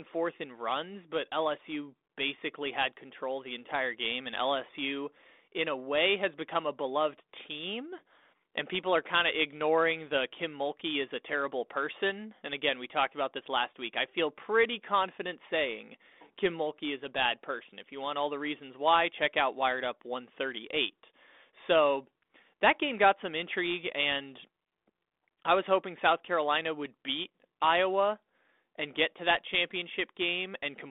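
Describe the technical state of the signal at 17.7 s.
At 17.7 s the audio is intact, with no fault at that moment beyond the ordinary band-limited sound of the 32 kbit/s G.726 ADPCM telephone path, which passes roughly 250 Hz to 3.6 kHz.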